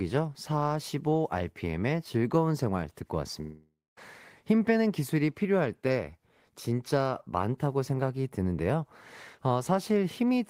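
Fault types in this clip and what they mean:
Long network dropout: at 3.41 to 3.99 s, speech is continued as a fading buzz or hiss, then about 0.24 s of silence, likely lost packets. It resumes with material skipped, unlike a brief glitch.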